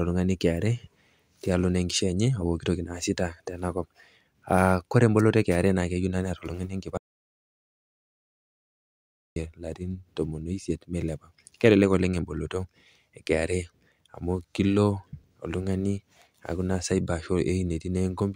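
Speech that cuts out abruptly at 6.97 s and returns mid-flow at 9.36 s, leaving about 2.4 s of silence with no room tone. This audio dropout to silence likely came from the input disconnecting or muting while recording continued writing silence.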